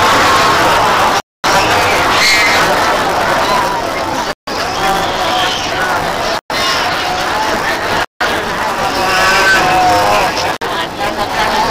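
Buffer tearing runs from the very start to the end: a steady robotic buzz at 200 Hz rides on everything and stops whenever the signal is quiet. The writing side and the reading side of the playback ring buffer have drifted until they cross inside each period, so roughly a third of every buffer is stale audio from about 15 ms earlier. The hard joins on both sides of that stale slice repeat at the 200 Hz buffer rate.

A Bluetooth stall follows at 1.19 s: the sound drops to silence for 253 ms and resumes at 1.44 s. Similar gaps come at 4.32 s (155 ms), 6.38 s (122 ms), 8.03 s (174 ms) and 10.55 s (62 ms). The likely cause is radio interference delaying packets until the headphones' buffer ran dry, so playback paused until the resent data arrived.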